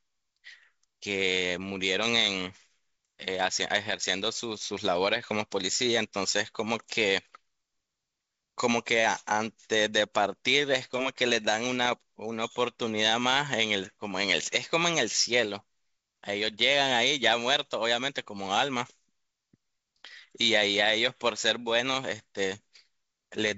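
At 3.62 s a sharp pop breaks into the speech, and from 11.85 to 11.93 s a rough burst follows, both from bit errors on an ADPCM link, at a rate of a small fraction of a percent. Each corrupted bit throws off the decoder's step size and predictor, so the damage rings on as brief level jumps and grit instead of leaving a silent gap the way a dropped packet would. The clean 7 kHz G.722 sound of the call continues around both events.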